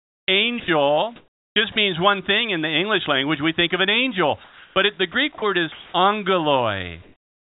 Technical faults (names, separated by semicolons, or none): comfort noise in place of the background; sound dropped by the voice detector; sound chopped by the voice detector